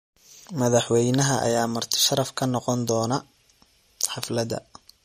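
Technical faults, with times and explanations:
throughout: MP3 compression. A low-bitrate MP3 encode, one that fits about 48 kbps, is the likely cause. Short of bits, the encoder removed everything above 14.6 kHz and let weak frequency lines drop in and out between frames, so the speech sounds plainly watery and swirly.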